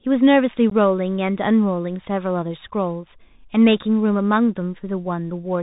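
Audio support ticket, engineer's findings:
Bluetooth CVSD headset codec, whole clip: link running narrowband CVSD. Speech band-limited to 4 kHz, s sounds scratchy, granular hiss underneath, loud high passages distorting from step-size overload.

Unconcealed Bluetooth headset packet loss, 0.70–0.73 s: a couple of voice packets dropped, filled with silence or an idle pattern. Abrupt hole of about 15 ms; speech returns briefly quieter.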